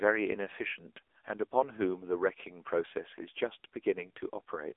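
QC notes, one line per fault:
Throughout, AMR narrowband mobile codec: the voice has that phone-call sound, squeezed into roughly 300 Hz to 3.5 kHz with nothing above 3.6 kHz. The codec rebuilds speech from a vocal-tract model driven by sparse pulses every few milliseconds, so at a low bit budget you get a clearly buzzy, synthetic edge on the voice. That degree of damage fits one of the lower AMR-NB modes, around 7.95 kbps.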